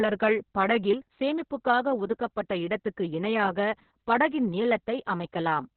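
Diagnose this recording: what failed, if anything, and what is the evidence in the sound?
The failure is at the codec stage: Opus voice compression, applied throughout the speech. Nothing survives above about 4.2 kHz, so the band has been cut to narrowband and the speech sounds muffled and boxy. The damage is heavy. The speech comes out hoarse and slightly robotic. That points to the SILK linear-prediction coder running with a very coarse excitation, which fits a bitrate near 6 kbps. The texture also suggests long frames, around 60 ms.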